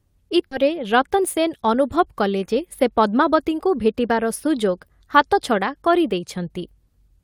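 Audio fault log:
0.51–0.53 s, skip ahead: With later packets already waiting, the receiver discarded a stretch of speech, either lost in transit or dropped when the jitter buffer overflowed. Roughly 0.7 s goes missing, and the two sides join with no filled gap, so the speech lurches abruptly forward.
1.10–1.69 s, jitter buffer speed-up: The buffer was holding more than its target, so the receiver repeatedly cut short pitch-period-sized slices, about 50 ms in all. The speech plays at 108% speed with unchanged pitch and sounds hurried.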